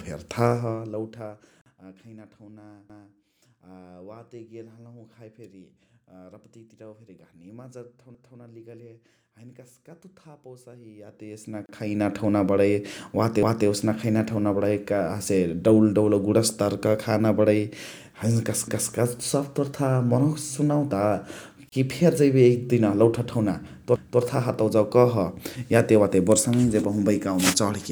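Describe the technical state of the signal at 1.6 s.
The speech cuts out for about 46 ms, from 1.61 to 1.66 s, then resumes where it stopped: a gap at a join of encoded pieces, where untrimmed encoder delay and padding leave silence.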